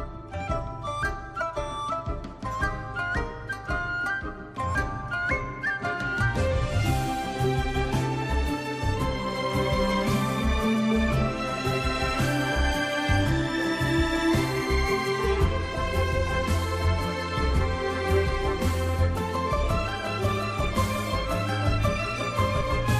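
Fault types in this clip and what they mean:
Compressed frames skipped: four brief forward jumps in the audio, at about 1.56, 6.8, 10.73 and 22.6 s, each dropping roughly 20 ms, about 50 ms at 6.8 s. Whole encoded frames were missing or rejected as damaged, so playback leaps past them.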